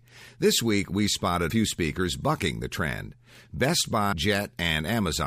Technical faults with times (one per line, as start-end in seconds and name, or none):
1.49 damaged data in a compressed stream
4.11 damaged data in a compressed stream